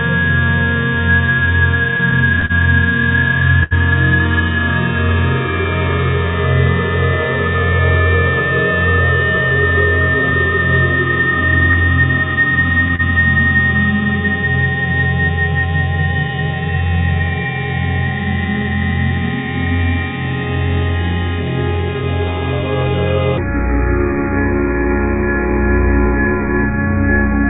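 The audio comes through a call path that cuts everything off above 4 kHz, which fits a G.711 mu-law link, and it has three distinct problems. From 1.97 to 3.74 s there's repeated stalling, a stutter where the jitter buffer kept running dry because packets showed up late. The receiver stretched the last sound over five holes, about 179 ms in total and 75 ms at the longest, so nothing is actually lost but that stretch drags and hiccups. Then between 11.72 and 13.02 s come a few scattered short gaps, each around 30 ms at most, from packets lost or late one at a time. Patching them by continuing the previous sound leaves small ticks and smears there, with 30 ms of real audio gone. Finally, from 23.38 s to the end, the section plays at the wrong speed, 0.68 times normal, so it's slower and roughly seven semitones deeper. That's likely playback or editing on a mismatched clock.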